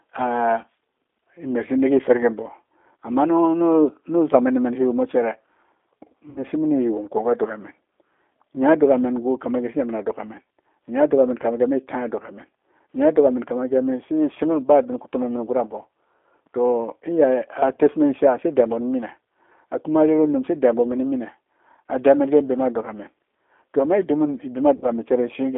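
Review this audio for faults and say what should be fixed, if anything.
The whole recording carries G.729 codec damage: the band is confined to about 300 Hz to 3.6 kHz, and the speech has a rough, synthetic texture that fits an 8 kbit/s G.729A coder rebuilding the signal from a filter, pitch predictor and sparse pulses. To prevent it, use a wideband codec such as G.722 or Opus on the call path.

VoIP packet loss concealed by the speech codec occurs at 6.30 to 6.45 s, 17.74 to 17.79 s and 24.76 to 24.91 s. There are gaps of about 60 ms, 30 ms and 60 ms, which fits two, one and two lost packets. The decoder extends its last pitch and filter into a fading buzzy tone or coloured noise, and the speech stays weakened briefly after packets resume. To prevent it, reduce network loss and add jitter buffering or forward error correction.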